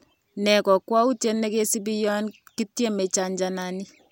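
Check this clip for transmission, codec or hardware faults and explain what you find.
No fault can be heard anywhere in this speech recording. There is nothing further to report.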